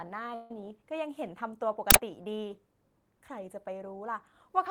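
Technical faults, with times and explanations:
0.34–0.61 s, call audio freeze: the speech stops moving and the last sound is stretched into a buzzy tail lasting about 156 ms that fades away. When the audio resumes, it picks up where it stopped, with nothing lost, so everything after this point arrives about 156 ms later. The likely cause is delayed packets draining the jitter buffer, with the receiver extending the last sound until the packets arrive. On a spectrogram the formant pattern freezes into flat, smeared horizontal bands that thin out, and the waveform shows a repeating, decaying pattern.
1.91–1.95 s, uninitialised buffer: a 40 ms block of harsh digital noise breaks into the speech. A playback buffer was sent out before any audio had been written to it, so leftover memory contents were played as samples. That garbage bears no relation to the signal around it, which is why it sounds so abrupt and abrasive. 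The waveform shows a sudden rectangular slab with hard edges, and the spectrogram shows a bright vertical bar spread across the whole frequency range.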